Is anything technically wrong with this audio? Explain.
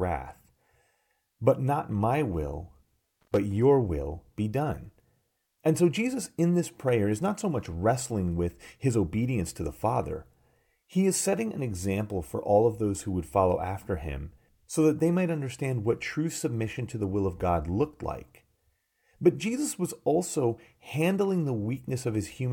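Yes. From 3.21 to 3.37 s the speech is broken by loose connector crackle. A worn or dirty contact in the signal path is making and breaking intermittently, so for about 0.16 s the audio is repeatedly chopped on and off. Any DC sitting on the line jumps with each break, which adds pops. What reaches the ear is a short, irregular burst of scratchy crackle laid over the speech.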